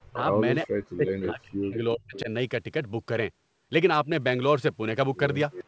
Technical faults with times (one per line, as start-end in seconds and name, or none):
0.00-0.25 speech suppressed in double talk
0.66-2.29 speech suppressed in double talk
1.07-1.30 echo leak
2.15-2.20 echo leak
5.51-5.64 echo leak